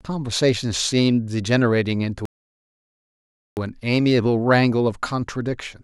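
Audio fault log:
2.25–3.57 s, rebuffering stall: playback of the speech halts to silence for 1.3 s as the player's buffer runs dry, then resumes exactly where it stopped, adding time without losing any audio.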